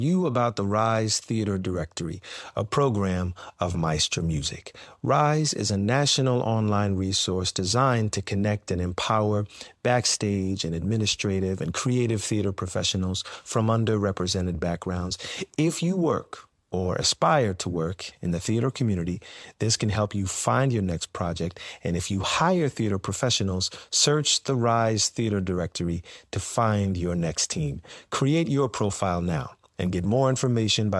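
Speech, with no technical faults to be heard anywhere.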